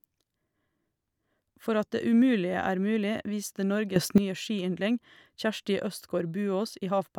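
At 3.96 s the speech steps up by about 12 dB and holds there until 4.18 s, just before "nye skiyndling". This sudden gain jump is likely an unramped digital gain change. The waveform envelope widens abruptly, and the spectrogram brightens at every frequency, background noise included.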